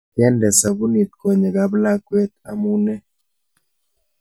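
Speech, with channel delay (comb filtering) from 0.68 s to 3.55 s. Over that stretch the audio turns hollow and phasey, as if heard through a tube. One channel arrives roughly 5 ms behind the other, and when the two are folded to mono the shared content cancels at regularly spaced frequencies. The first notch sits somewhere around 100 Hz, with further fixed notches repeating up the spectrum at about twice that spacing.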